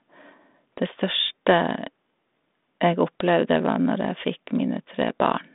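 No technical faults can be heard in this speech.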